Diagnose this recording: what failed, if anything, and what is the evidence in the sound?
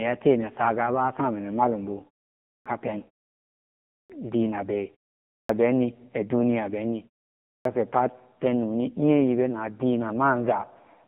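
The speech sounds buzzy and synthetic, confined to a 150 Hz to 3.6 kHz band with nothing above. This is codec-stage damage from the AMR narrowband mobile codec at 6.7 kbps, where a vocal-tract model driven by sparse pulses replaces the real waveform.

Speech bursts abruptly out of silence at 2.39, 3.84, 5.24 and 7.40 s, each onset missing 253 to 266 ms after a short pause. This is a clipped start after a pause at playback: the output device sleeps during silence and swallows sound while waking.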